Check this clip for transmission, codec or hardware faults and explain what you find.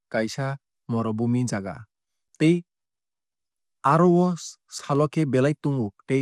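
Two faults can be heard in this speech clip.

Throughout, the speech sounds dull and gurgling, with nothing above 14.3 kHz. This is likely MP2 compression at a rate near 80 kbps, which starves and shuts off the upper sub-bands.

At 2.28 s and 4.79 s there are 6.5 ms holes. This is a gap between chunks: silence is inserted where 2.5 s blocks join, so nothing is lost but the flow breaks.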